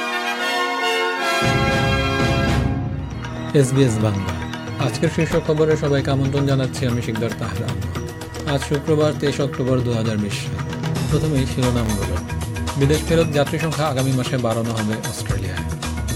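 From 11.65 to 12.05 s, processor overload crackle: the processor kept missing its deadlines for very short buffers, under a millisecond each, about fifteen times in quick succession. Each miss drops a sliver of silence with hard edges, so the sound tears into a gritty burst of crackle before clearing.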